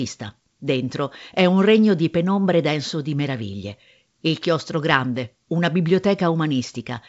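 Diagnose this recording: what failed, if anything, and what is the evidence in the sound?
Nothing failed: the speech sits on a wideband telephone path whose band stops near 7.7 kHz with only a faint upper-band hiss, which fits G.722 wideband telephone coding at 56 kbit/s doing its normal job.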